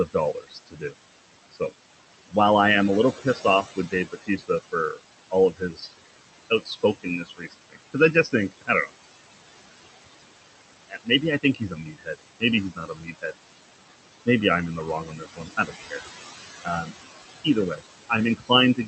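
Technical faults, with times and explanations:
Throughout: noise suppressor artifacts. The background sinks away in the pauses and swells back up under the speech. The room noise sits only about 10 dB below the speech, and the suppressor pulls down every band it judges to be steady noise by about 18 dB, frame by frame. That constant gating of the noise, plus the leftovers between bands, produces the pumping.
0.06–0.94 s, 3.18–5.92 s (just after "I am a little"), 6.5–8.9 s, 10.89–13.33 s, 14.26–16.03 s, and 16.59 s to the end: speech cut by the noise suppressor. Within each stretch, soft consonants, word endings and quieter syllables go faint or sound swallowed, adding up to roughly half a second to a second in each of the first five stretches. The suppressor mistakes these quiet parts for noise and drops them by about 16 to 21 dB.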